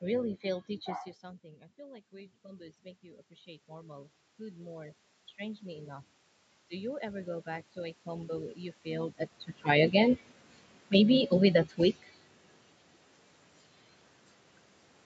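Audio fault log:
1.21–6.08 s and 6.7–8.85 s, automatic gain rising: the talker backs off around 1 s, the input drops about 17 dB, and the gain control slowly climbs about 12 dB, then another 3 dB, so voice and room noise swell up together.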